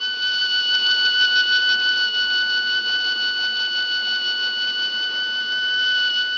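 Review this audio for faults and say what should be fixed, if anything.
Bluetooth SBC compression, most likely from a link running with a very small bit pool, is present through the whole music clip. Starved of bits, the encoder leaves its upper sub-bands nearly empty and quantises the rest coarsely. The treble thins and flickers, and a gritty, grainy noise with aliasing sits on the music. The damage is heavy, which fits a rate around 64 kbps, and nothing lies above 20.6 kHz. To prevent it, use a wired connection or a higher-quality Bluetooth codec and bit pool.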